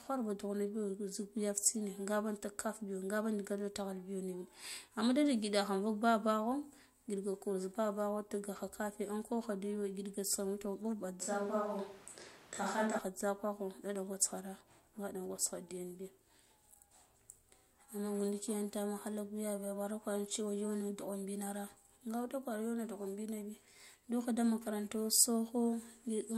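A speech recording in which the close microphone likely dropped out from 11.21 to 12.99 s, so a switch to a distant microphone puts the voice far off: roomy, hollow and thinner in the bass, with background noise about 25 dB below the speech, at roughly unchanged level, before abruptly returning.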